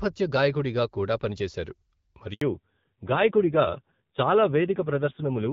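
At 2.33 s, right after "గాయకుడిగా కూడా పనిచేశారు", the speech breaks off in a handover gap. As the call switches from one network to another, no speech frames arrive for 80 ms, so the sound fades within a few tens of milliseconds and goes dead until 2.41 s. The waveform shows a short flat, silent stretch, and the spectrogram shows a clean vertical blank band across every frequency.

From 2.41 s to the end of the clip, a fallback to narrowband sets in. Before the gap, the HD Voice wideband codec carried the speech with only light coding roughness, consistent with a rate around 12.65 kbit/s. Afterward, nothing above 4 kHz remains, which points to an older narrowband codec running at a low rate such as 5.9 kbit/s. The sound turns duller and muffled, with a grainy, raspy edge. On the spectrogram, the energy is cut off sharply at 4 kHz, and the upper band is empty from that point on.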